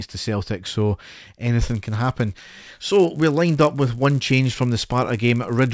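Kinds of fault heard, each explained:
Resampler restarted on every block: From 1.62 s onward, each 10 ms block is converted from 48 kHz to 16 kHz alone. Its edges lack the true neighbouring samples, so each carries a small error. At 100 per second these form a buzz heard only under the speech.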